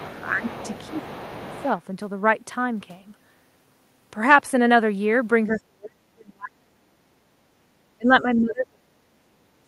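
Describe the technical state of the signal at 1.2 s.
At 1.2 s there's other side's voice leaking through, running from the start to 1.66 s. A faint second voice, roughly 20 dB under the talker, sits underneath. That's likely the far end playing on a loudspeaker and the echo canceller not fully scrubbing it from the mic.

On top of that, from 0.9 to 1.66 s you get speech suppressed in double talk. The talker's level dips by up to around 10 dB, for about half a second in total, likely because the canceller couldn't tell the talker from the echo and pulled both down.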